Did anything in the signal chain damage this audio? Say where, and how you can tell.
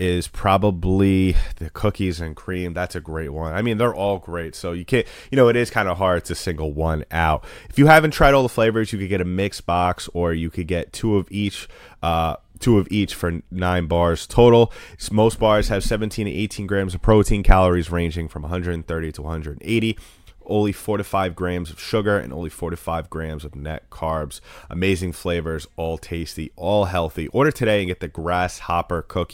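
No, nothing in the chain audibly damaged this speech recording at any stage from capture to playback.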